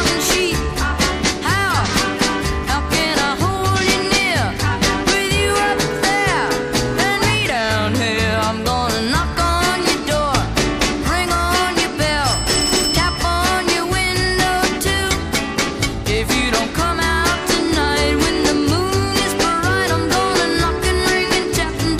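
No technical faults can be heard anywhere in this recording.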